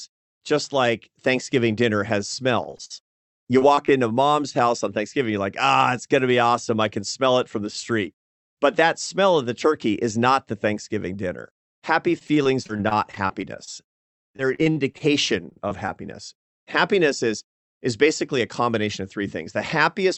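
From 2.63 to 3.90 s, between "dinner has" and "into mom's house on", repeated packet loss turns the sound choppy and robotic. Ten short holes, the longest 52 ms, are patched by stretching out the last piece of sound, so about 16% of the stretch is filler. Those repeated fills give the robotic quality. This sets it apart from a single dropout, which would leave one clean hole rather than a rapid series.

The same fault returns from 12.19 to 15.90 s over a longer stretch. There are 26 gaps, none longer than 44 ms, and about 14% of the span is concealed. The repeated holes again give a stuttering, mechanical texture with fragments missing.

From 17.68 to 19.20 s a jitter buffer speed-up sets in. The receiver, holding more audio than it wanted, cuts out tiny pitch-period slices totalling around 70 ms. The sound runs at 104% speed but keeps its pitch. Unlike packet loss, there is no chop or robotic buzz. 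The passage simply runs slightly faster than normal.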